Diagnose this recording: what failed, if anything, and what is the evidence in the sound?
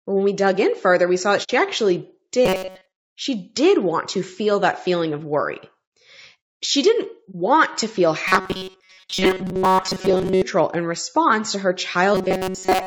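Codec stage: the whole recording sounds rough and grainy, with noise between the harmonics, which points to low-delay AAC compression, likely AAC-ELD at about 32 kbps, not to analogue noise.

Network or decoder stage: AAC frame loss with muting leaves a soft-edged hole at 1.43–1.50 s (60 ms) and a brief dip at 7.31–7.35 s (30 ms). Zeroed spectrum fading through overlapping windows separates these from hard dropouts.

Driver or buffer stage: robotic sound from repeated short buffers at 2.46–3.06 s, 8.28–10.42 s and 12.15 s to the end is a rigid 188 Hz buzz, likely from a 5.3 ms loop replacing most real audio. Its fixed pitch separates it from codec graininess.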